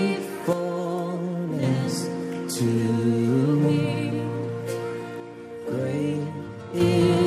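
At 0.53 s the level falls abruptly by about 6 dB and holds until 1.63 s. The same sudden drop returns from 5.20 to 6.80 s. Both point to one channel drops out, likely. One stereo side went silent, so the mono sum lost half its shared signal.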